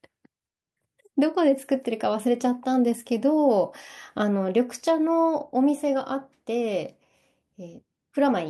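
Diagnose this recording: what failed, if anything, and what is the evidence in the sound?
Nothing failed; no fault is audible in this recording.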